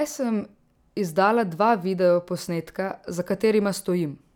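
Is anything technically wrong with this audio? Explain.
No, nothing technically wrong stood out on listening to this recording.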